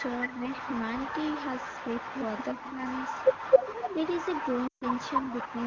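From 0 to 0.3 s, a delayed copy of the speech trails it by about 260 ms at roughly equal loudness. It returns about 5 dB quieter from 0.46 to 2.7 s and again from 2.86 s to the end. This is an echo leak, likely a far-end loudspeaker whose echo canceller let its microphone pickup back into the call.

The speech dips by about 5 dB at 0.38 to 0.44 s, by about 15 dB at 2.54 to 2.8 s and by about 10 dB at 3.74 to 4.0 s. This is speech suppressed in double talk, likely the canceller turning its own talker down along with the echo while both sides spoke.

At 4.67 to 4.85 s, the sound drops to near silence for 140 ms, then comes back weak. These are lost AMR speech frames, with the wideband decoder reusing the last good settings at falling gain.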